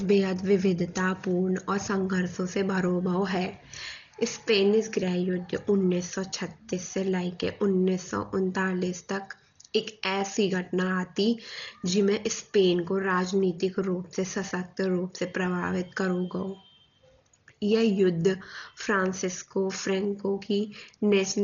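Throughout, the speech sounds dull and rough, likely from Dolby Digital compression around 32 kbps; a spectrogram shows a hard 6.9 kHz ceiling and speckled fill.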